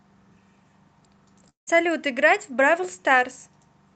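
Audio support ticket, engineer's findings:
Long network dropout, 1.49–1.69 s: speech breaks off, the last sound smears into a fading buzz, then about 140 ms of near silence before audio resumes with roughly 180 ms of speech missing. Likely packet loss outlasting jitter-buffer concealment. Band-limited call-codec sound throughout, consistent with Opus around 32 kbps.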